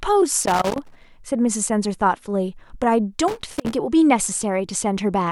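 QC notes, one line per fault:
0.42–1.05 s and 3.28–3.75 s: loose connector crackle, irregular scratchy bursts from a worn contact making and breaking, chopping the speech and popping on any DC.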